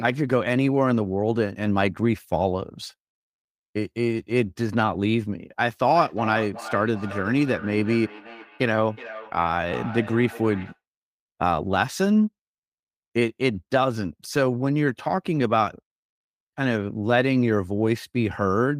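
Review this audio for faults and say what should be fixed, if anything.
From 5.95 to 10.8 s there is a feedback echo between two devices. A second device in the same room is playing this call aloud, and this microphone picks that playback up again. Each device's echo canceller removes only its own playback, so the speech returns about 0.4 s later, thinner and more ringing, peaking at about 14 dB below the direct speech. On a spectrogram, faint copies of each syllable's harmonics trail it at that spacing. The waveform shows smaller, evenly spaced bursts after each utterance. To prevent it, mute the speaker and microphone on all but one device in the room, or have everyone in the room use headphones.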